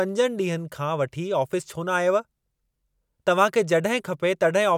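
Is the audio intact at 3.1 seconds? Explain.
Yes, the audio is intact at 3.1 seconds, with no fault audible at that moment.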